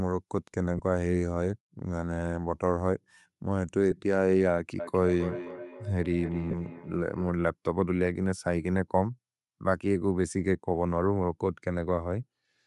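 Throughout the speech, the top of the spectrum sounds thin and noise-filled. Consonants carry a breathy, grainy edge. The likely cause is Bluetooth LC3 compression at a modest rate, around 48 kbps. The upper band is zeroed, then patched with noise.

Lost LE Audio frames cause brief dropouts at 0.78 s and 3.91 s. The first lasts about 15 ms, which fits two lost frames. The second lasts about 7.5 ms, which fits a single frame. The decoder repeats the last spectrum with scrambled phase. Each gap becomes a short, noisy smear.

From 4.79 s to 7.38 s, a feedback echo between two devices appears. One device replays what the other's microphone captured. That sound re-enters the microphone. Each phrase returns roughly every 300 ms, thinner and more ringing. The loudest repeat sits about 10 dB below the speech.

Inside that echo, from 6.51 s to 6.53 s, more lost LE Audio frames follow. This gap lasts about 22.5 ms, which fits three frames. 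The concealment repeats the spectrum longer, so the sound turns into a smeared, hissy blur.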